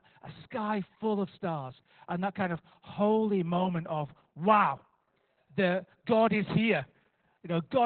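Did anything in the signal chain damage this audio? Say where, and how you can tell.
Yes, at the codec. Opus voice compression runs throughout. Nothing sounds above 4.4 kHz, and the speech is muffled and hoarse. That fits narrowband SILK at about 8 kbps.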